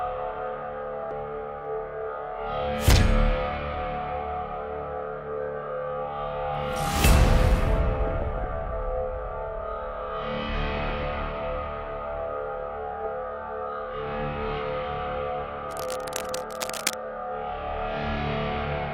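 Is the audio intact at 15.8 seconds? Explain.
No. From 15.71 to 16.94 s, cable scratch noise adds a dense, uneven scratching rustle, roughly 10 dB below the sound, likely from a worn cable or connector whose contact shifted. A spectrogram shows ragged broadband smears; the waveform shows jagged, irregular bursts.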